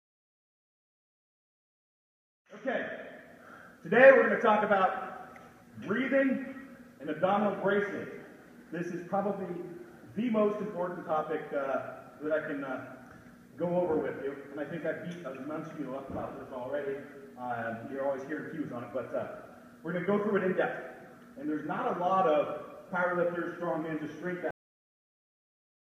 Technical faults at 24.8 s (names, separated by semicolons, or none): cut-off end